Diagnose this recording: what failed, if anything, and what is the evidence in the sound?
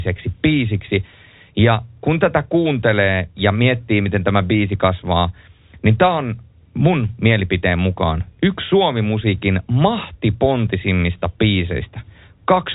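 Nothing in the speech has failed: it carries the narrow band of G.711 telephone coding, with nothing above about 4 kHz, consistent with a 64 kbps mu-law line, and at most a faint trace of that format's own coding grain.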